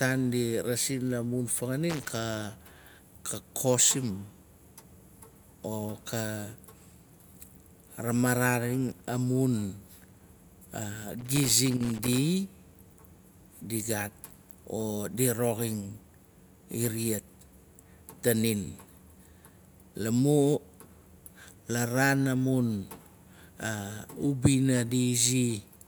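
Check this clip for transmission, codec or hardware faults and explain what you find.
Two bursts of loose connector crackle, at 1.90 to 2.16 s, right after "di rasis la mun", and at 11.20 to 12.18 s. Irregular crackle and scratching chop the speech. A worn or dirty contact is rapidly making and breaking.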